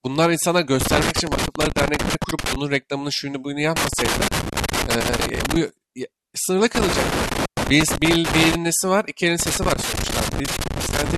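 Speech, with loose connector crackle breaking in four times: 0.81 to 2.56 s, 3.76 to 5.56 s, 6.75 to 8.55 s, and 9.40 s right to the end. Each burst is that irregular scratchy chatter of a worn or dirty contact cutting the signal in and out as it shifts.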